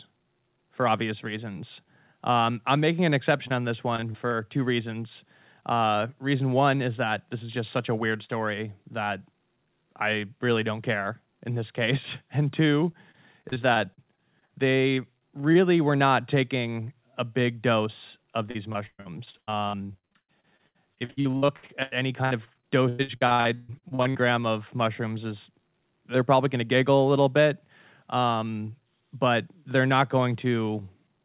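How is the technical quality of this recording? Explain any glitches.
It's a phone-grade call recording with packet-loss trouble. Everything is capped at 4 kHz, which fits a G.711 narrowband call path.

Short concealed packet loss, at 3.48 s between "I'm making an" and "on this": about 20 ms never arrived. The decoder stretched the previous sound over the gap, leaving a quick smear.

Repeated packet loss (robotic sound), at 3.96–4.34 s, 12.92–14.51 s, 14.95–15.57 s and worst at 18.51–24.17 s (between "a big dose of" and "gram of mushrooms is"). Gaps keep getting patched, so the sound turns choppy with pieces missing. In the last stretch over a third is filled, with holes up to 137 ms.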